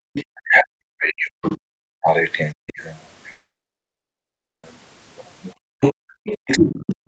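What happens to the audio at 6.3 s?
With both sides likely talking at once, the echo canceller turned everything down from 5.74 s to the end: speech suppressed in double talk, dipping very deeply. From 5.81 s, the other side's voice leaking through comes in, likely because the canceller let the loudspeaker echo pass, at roughly the talker's own level.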